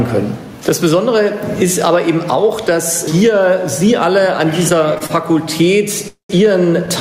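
Throughout the clip the gain swings by roughly 15 dB. This is gain pumping, likely from excessive input gain driving a fast limiter.

From 4.69 to 5.12 s, repeated stalls (stutter) appear: four brief holds, the longest 32 ms, fill about 81 ms as the jitter buffer repeatedly runs dry, dragging the sound without losing any.

At 6.08 to 6.37 s comes a call audio freeze. Likely delayed packets leave about 213 ms filled by a fading continuation, including 120 ms of silence, before the audio resumes where it stopped.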